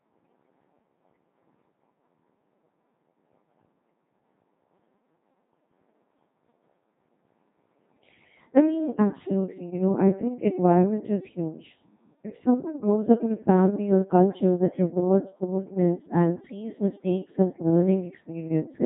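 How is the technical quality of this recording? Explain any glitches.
The quality is poor, with one fault running from start to finish.

Codec 2 vocoder, throughout: the speech has been reduced to a pitch track, a voicing decision, a loudness level and a rough spectral shape, then rebuilt at the decoder from summed sine waves, so none of the original waveform survives. The damage is heavy, consistent with the 2.4 kbit/s mode. The voice comes out robotic and buzzy, with breathiness and texture replaced by a synthetic tone, and nothing remains above 3.8 kHz.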